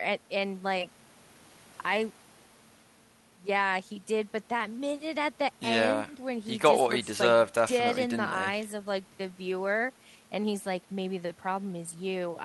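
No technical faults can be heard anywhere in the speech recording, and the signal stays intact and steady throughout.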